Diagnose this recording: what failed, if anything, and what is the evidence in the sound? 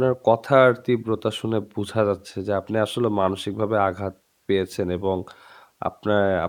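Nothing in the signal chain failed: the speech recording holds a continuous, intact signal with no audible disturbance at any stage from capture to playback.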